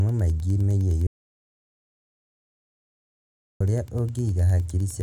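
Wi-Fi interference runs through the whole clip: a nearby radio's beacon, rectified by the audio circuit, ticks every 102.4 ms, roughly 30 dB below the speech. From 1.07 s to 3.60 s an audio dropout to silence removes about 2.54 s, leaving silence with no room tone, likely from a lost input link.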